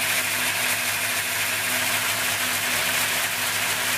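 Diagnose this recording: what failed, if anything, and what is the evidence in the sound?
The converter stage failed: periodic clock jitter from 1.78 s to the end. A rough, metallic edge appears, strongest on high-frequency content, as sidebands spaced around 500 Hz either side of each component. Interference is modulating the sampling clock at that rate.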